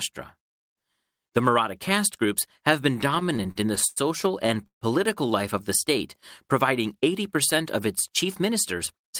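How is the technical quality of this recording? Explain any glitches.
The recording has two kinds of network glitch: a couple of stuttering patches in the middle and a hurried stretch right at the end.

From 3.01 to 3.98 s there are repeated stalls (stutter). The speech hiccups about a dozen times, with the receiver filling roughly 230 ms in total and the longest hold at 95 ms, so about a quarter of that stretch is concealment. The same thing comes back from 4.42 to 4.83 s: five stalls covering about 190 ms, one of them a 149 ms hold, which is nearly half that window. What's happening is that packets were arriving late or too slowly, the jitter buffer kept running dry, and each time the receiver stretched out the last bit of sound, fading it on the longer waits, until fresh audio showed up. Nothing is actually lost, but the speech drags and stammers.

Then from 8.09 to 9.11 s there's a jitter buffer speed-up. 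The buffer had built up more audio than it wanted, so the receiver trimmed it back by snipping out tiny pitch-period-sized chunks over and over, something like 70 ms in all. Playback runs at about 105% of normal speed, so the pitch stays the same but that last second sounds a little rushed.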